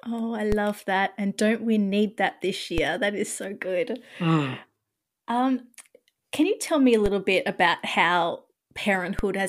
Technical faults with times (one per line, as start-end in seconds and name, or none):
0.52 DC step
2.78 DC step
7.06 DC step
9.19 DC step